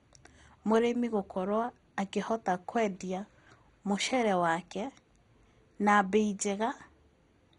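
MP2 compression runs through the whole speech clip, from start to finish. The sound is dull, with nothing above 11.2 kHz, and heavy damage shows as a gurgling, granular texture. The likely cause is an MPEG Layer II encoder starved of bits, consistent with a low rate near 56 kbps. It divides the spectrum into 32 sub-bands, shuts off the upper ones, lets others flicker in and out, and quantises the remaining bands coarsely.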